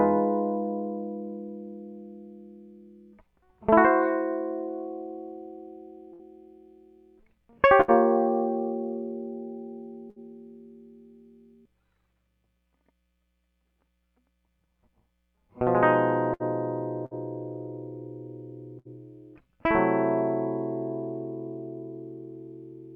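Bursts of packet loss at 6.13, 7.81, 10.10, 16.34, 17.06 and 18.79 s: about 60 ms of music is lost each time, bridged by a fading extension of the preceding sound before playback resumes.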